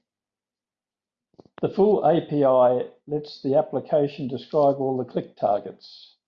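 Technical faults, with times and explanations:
No technical faults can be heard in this speech recording.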